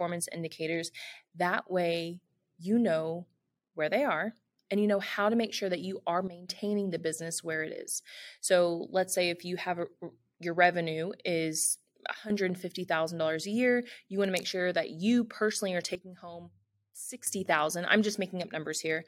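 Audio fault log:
6.28–6.49 s, 12.14–12.30 s, 15.95–17.27 s: sudden gain jump. Level drops about 13, 11 and 12 dB instantly, background noise included, likely an unramped gain step, unlike a smooth fade.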